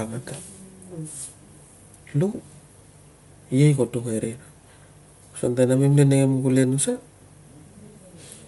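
Throughout the speech, the upper range has a grainy, breathy edge and stops dead at about 11.6 kHz. This is Bluetooth LC3 compression, likely the cause, coding in 10 ms frames and trimming the top band in a way that fits a 48 kbps link.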